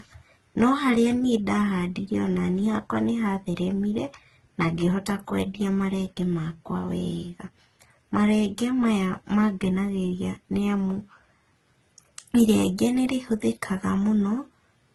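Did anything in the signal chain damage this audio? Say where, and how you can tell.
Yes. Transcoding between lossy codecs, throughout the speech, at the codec stage: nothing remains above 12.2 kHz, and two kinds of coding artefact are heard together. This likely comes from a low-rate HE-AAC encode re-encoded to Opus, with Opus spending bits on the earlier damage and adding its own.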